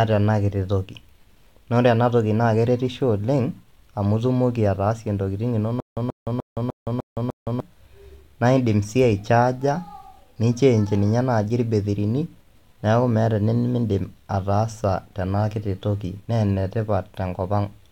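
From 5.8 s to 7.6 s the speech breaks into a stutter with silent gaps. A 132 ms fragment plays, then about 168 ms of dead digital silence, repeating every 300 ms, six times in all. The likely cause is a stalled player or stream replaying its last buffered fragment at each retry before running empty. Ordinary dropouts cut into fresh audio, but here the same burst repeats identically at a steady rate, and the speech that should have filled those 1.8 s is lost.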